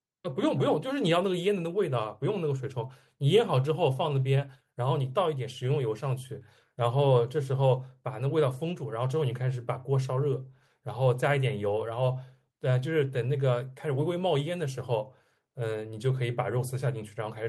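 No technical faults detected.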